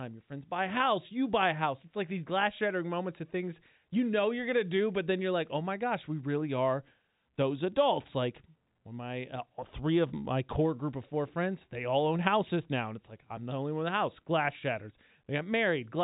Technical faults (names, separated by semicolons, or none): none